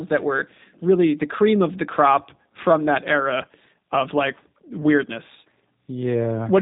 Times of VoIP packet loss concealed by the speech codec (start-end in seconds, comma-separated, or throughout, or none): none